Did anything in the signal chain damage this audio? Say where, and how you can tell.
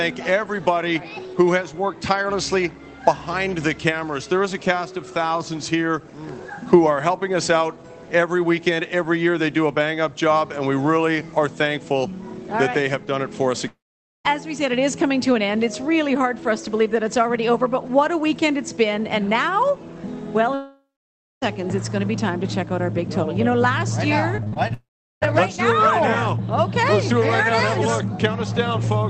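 Yes. Long network dropouts at 13.67–14.26 s, 20.54–21.43 s and 24.74–25.23 s: the last sound stretches into a fading buzz, then silence of about 0.5, 0.59 and 0.39 s, and the audio resumes with roughly 0.58, 0.88 and 0.48 s gone. This is likely a network outage the receiver concealed.

Repeated packet loss (robotic sound) at 24.36–24.72 s, just before the final dropout: five short holes, the longest 40 ms, are each patched by extending the preceding sound, so about a third of that stretch is filler. The result is choppy audio with pieces missing, from the network stage.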